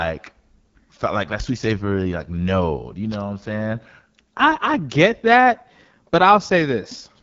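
From start to finish the speech has a rough, raspy grain, and the sound stops dead above 7.5 kHz, so the top octave of air and sibilance is missing. This is the AMR wideband (HD Voice) codec running at one of its lowest rates, which fits about 8.85 kbit/s. At that rate the pulse-driven vocal tract model has too few bits to follow the voice closely, so its errors come through as plainly audible grit.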